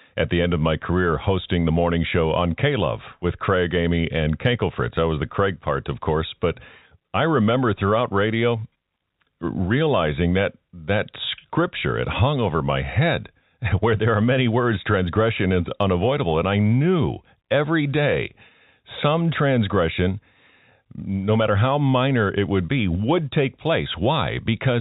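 Nothing is technically wrong in this speech clip. It has the narrow sound of G.711 telephone coding, with nothing above 4 kHz and a faint quantisation hiss that rises and falls with the level.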